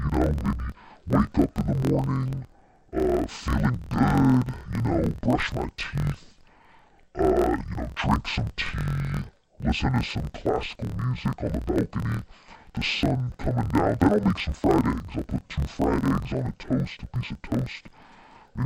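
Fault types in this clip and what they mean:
Interleaved audio read as planar, throughout the clip: each 24 ms block of alternating left and right samples is split so that its first half feeds the left channel and its second half the right, each stretched across the whole block. Both channels therefore run at half speed, dropping the speech a full octave (12 semitones) while its pace stays normal, and the restart every block adds a choppy, doubled buzz at about 41.7 Hz.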